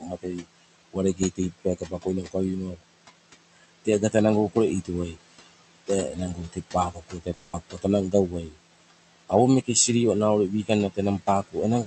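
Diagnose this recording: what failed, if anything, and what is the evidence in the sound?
The call processing stage failed, specifically its noise suppressor. Room noise sits about 13 dB below the speech, and the suppressor pulls it down by about 19 dB between phrases. The noise then swells back under each phrase. These are noise suppressor artifacts. The suppressor decides band by band and frame by frame what counts as steady noise, so the residue pumps.

The same suppressor also caused speech cut by the noise suppressor. Soft parts of the speech are turned down with the background, by about 16 to 20 dB at worst. This happens at 0.00–2.35 s, 2.72–2.84 s, 3.56–4.14 s, 4.53–5.48 s, 5.87–8.56 s and 10.64–11.86 s. Quiet consonants and word endings sound swallowed. The longest stretches lose several tenths of a second of speech in total. The suppressor treated these low-level sounds as noise and gated them away.

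At 7.33–7.55 s the audio breaks for about 200 ms. The last sound is stretched into a short fading continuation, and speech resumes with that stretch missing. This is a long network dropout, most likely packets that never reached the receiver. The decoder's concealment filled the gap with a continuation of what came just before. The high end of the call audio tops out near 8 kHz throughout.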